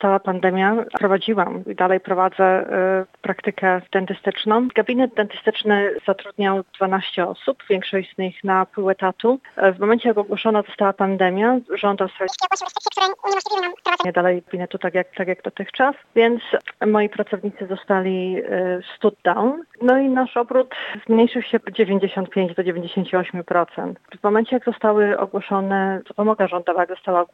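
Audio read two samples at a time (double speed), from 12.28 to 14.05 s: the reader treats each pair of samples as a single frame, so the sound runs twice as fast and an octave higher.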